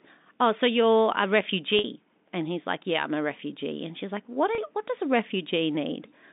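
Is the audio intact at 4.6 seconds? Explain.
No, there's a small packet loss with pitch repetition right around there, from 4.55 to 4.58 s. About 30 ms of audio went missing, which fits three lost 10 ms packets, and the receiver bridged it by repeating the last pitch period, so it comes across as a briefly held, slightly buzzy note.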